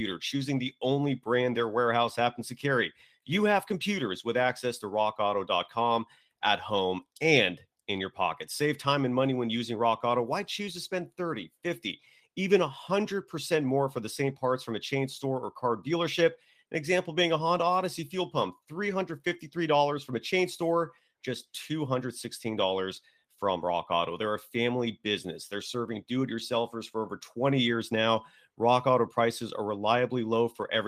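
No audible technical faults.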